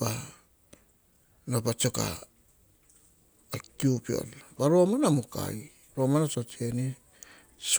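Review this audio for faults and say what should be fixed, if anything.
Nothing needs fixing, as the speech has no audible technical faults.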